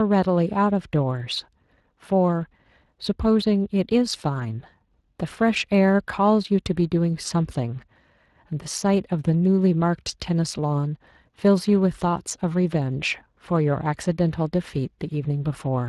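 It's a speech clip with Speex codec damage running the whole way through, and it's plainly audible. Speex is a CELP codec, so it rebuilds the voice from a predicted filter plus a coded excitation signal. Here the excitation is coarse enough that the speech comes out grainy and hoarse. That quality of damage fits a rate somewhere around 22 kbps.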